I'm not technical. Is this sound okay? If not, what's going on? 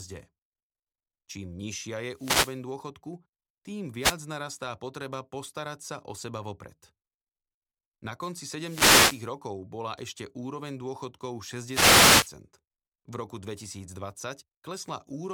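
No. Bursts of static swish over the speech at 2.14 to 2.61 s, 4.00 to 4.16 s (before "narastá potreba postarať sa"), 8.56 to 9.33 s, and 11.66 to 12.34 s (after "bola ešte úroveň dôchodkov"). These are wireless microphone noise hits: the radio signal briefly faded, letting receiver hiss break through.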